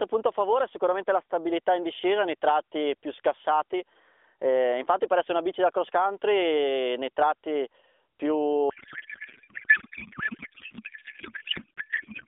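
From 8.70 s to the end of the clip, the speech turns into garbled noise and warble. This is a codec payload misread. The AMR narrowband stream, which sounds like its 12.2 kbps mode with light codec colouring and nothing above 4 kHz, stays intact up to that point. Then the receiver starts unpacking the frames wrongly. The pattern fits octet-aligned packing being read as bandwidth-efficient. Every field lands in the wrong place. The result barely follows the speech, and it never recovers before the clip ends.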